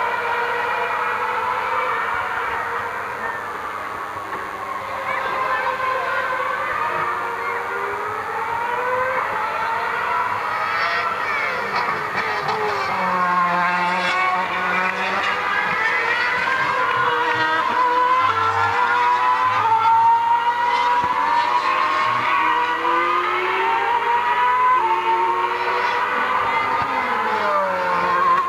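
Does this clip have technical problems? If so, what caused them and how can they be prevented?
Yes: a DECT cordless phone buzz runs throughout, a thin 100 Hz buzz, around 20 dB below the sound, from 10 ms radio bursts rectified by the audio circuit. Its many harmonics set it apart from smooth mains hum. Keep DECT handsets and base stations well away from the recording equipment.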